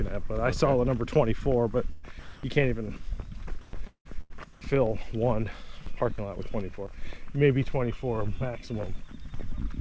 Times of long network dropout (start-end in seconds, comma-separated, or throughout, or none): 3.87-4.07